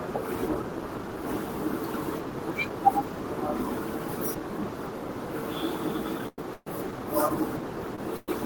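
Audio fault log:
6.28 to 6.39 s and 7.96 to 7.99 s: short stall from a late packet. The last sound is held for 96 ms and then 19 ms while the receiver waits, with a faint buzz, and then continues with nothing lost.
6.54 to 6.67 s and 8.17 to 8.29 s: call audio freeze. The sound is continued as a fading buzz for 126 ms and 111 ms, ending in about 20 ms and 10 ms of silence, then resumes where it stopped. The likely cause is packets held up in transit, which emptied the jitter buffer.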